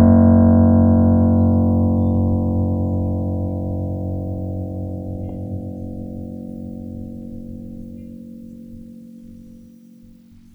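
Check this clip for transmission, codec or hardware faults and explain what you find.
No faults detected in this music.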